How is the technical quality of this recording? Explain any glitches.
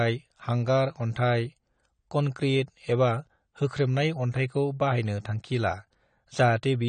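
The speech sounds dull and smeared throughout, with nothing above 9 kHz and a warbly, fizzy edge on sibilants. The likely cause is AAC compression at a low bitrate, perhaps around 32 kbps, coarsely quantising and discarding high frequencies.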